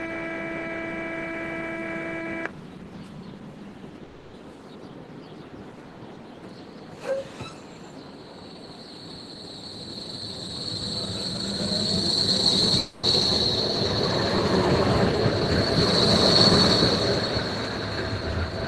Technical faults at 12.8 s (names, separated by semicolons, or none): long network dropout